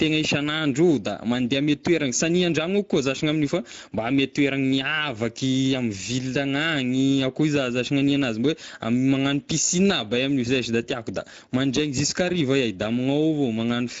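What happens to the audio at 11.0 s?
Hoarse, noisy speech with a grainy, artificial upper range, and nothing at all above 7.7 kHz. This Speex codec damage runs through the whole clip, not just at 11.0 s. The CELP coder has few bits for the excitation, which fits a mid-range setting of around 17 kbps, so the top band is only shaped noise.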